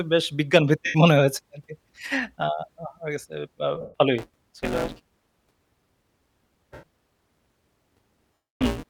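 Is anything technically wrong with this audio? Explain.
Yes. There are two faults.

Lost LE Audio frames occur at 0.86–0.95 s, 3.81–3.94 s, 6.74–6.83 s and 8.47–8.61 s. When LC3 frames fail to arrive, the decoder repeats the last spectrum with randomised phase signs and then fades it. The speech briefly smears into a noisy wash, and the longest dropout decays toward silence.

Buffer tearing starts at 4.18 s and runs to the end. The writing program and the hardware reader have drifted, so each period mixes in roughly a third of stale audio about 10 ms old, joined abruptly. The result is a steady robotic buzz at 172 Hz, which points to a 256-sample buffer.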